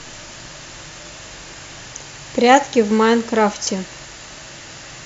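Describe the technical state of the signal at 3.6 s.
At 3.6 s the speech signal is intact, with no audible dropout, distortion, noise burst or other technical fault.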